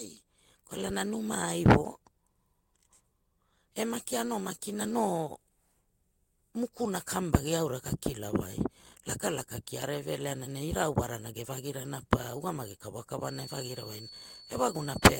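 From 13.18 s, right after "ge vagirana pa ugamagi", a feedback whistle sits at 4.4 kHz, well below the speech and slowly swelling and fading, likely a speaker-to-mic loop hovering at the edge of howling.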